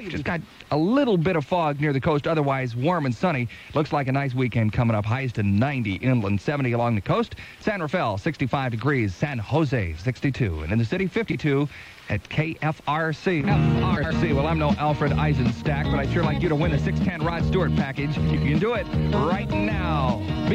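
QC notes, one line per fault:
11.30–11.35, 13.96–14.12 and 18.26–18.46 s: frames out of order. Neighbouring chunks of about 23, 70 and 93 ms play swapped, giving a garbled flutter, with no time lost.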